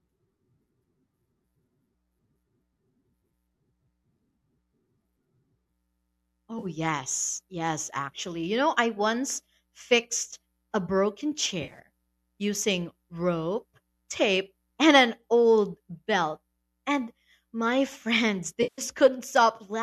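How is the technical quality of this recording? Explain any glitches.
Three brief dropouts interrupt the speech, each heard as AAC frame loss with concealment. At 6.59 s a 40 ms patch turns smeared and phasey. Just after "once fixed a broken", from 11.62 to 11.79 s, about 90 ms of gaps scattered over 140 ms, the longest roughly 40 ms, leave a smeared, noisy stretch. After "friends they", at 18.63 to 18.82 s, a 150 ms loss goes noisy and fades before the sound returns. In each case the decoder lost frames and rebuilt them from the last good spectrum, so the gaps sound noisy rather than silent. The short frames point to a low-delay AAC stream, likely AAC-ELD, with light coding roughness.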